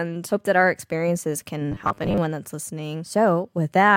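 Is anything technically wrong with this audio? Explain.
Yes. Robotic sound from repeated short buffers runs from 1.72 to 2.18 s. Audio likely arrived too slowly, so about half of this stretch is a short buffer replayed over and over. That fits a 10 ms buffer and imposes a rigid 100 Hz metallic buzz over the speech.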